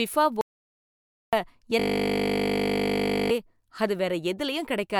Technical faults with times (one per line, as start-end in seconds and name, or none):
0.41-1.33 audio dropout to silence
1.79-3.31 system hang loop